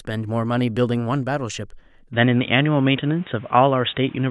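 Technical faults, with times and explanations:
2.13 s to the end: input switched to a poorer device. From no gap at all, the speech turns dull and boxy, with nothing above 3.8 kHz, a level shift of about 5 dB and new background noise about 30 dB down, likely from a narrower-band microphone or headset taking over.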